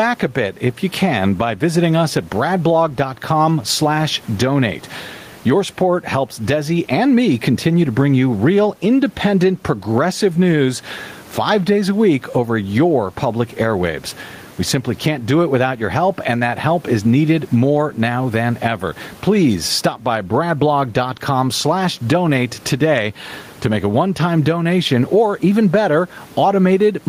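Gain pumping runs throughout the speech: the gain swings by around 15 dB, pulled down under every loud syllable, with the room noise about 35 dB below the voice. The likely cause is input gain set far too high, with a fast limiter clamping each peak.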